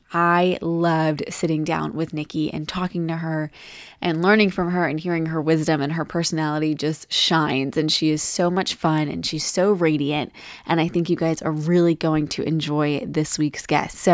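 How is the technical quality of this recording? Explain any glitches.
No technical faults can be heard.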